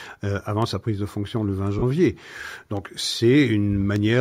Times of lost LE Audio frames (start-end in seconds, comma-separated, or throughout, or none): 1.79-1.82